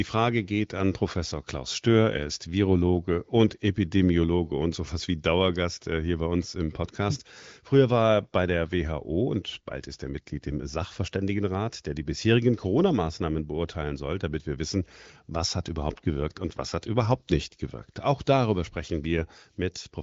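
Speech carried over an HD Voice path with content stopping around 7.5 kHz, as expected for AMR wideband at a mid-to-high rate, and no technical faults are present.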